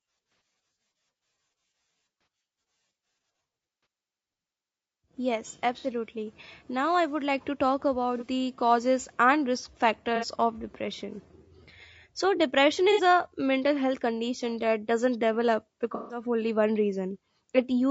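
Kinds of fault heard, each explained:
low-delay AAC compression: The speech was most likely coded with a low-delay AAC variant of the kind used in video calls, whose short frames give little frequency detail and spend bits fast; the sound points to a bitrate around 32 kbps. The damage is plainly audible throughout: the speech turns rough and grainy, noise fills the gaps between pitch harmonics, and the top band sounds thinned or artificial.
AAC frame loss with concealment: Coded frames went missing in transmission, and the decoder patched each gap by reusing and reshaping the last good spectrum. Eight such patches occur between 0.32 s and 16.22 s, lasting 30 to 150 ms. The pattern fits roughly 30 ms frames. Each is heard as a brief smeared, noisy or phasey spot. The longest, 15.95 to 16.22 s, falls between "condition that doesn't develop" and "only one".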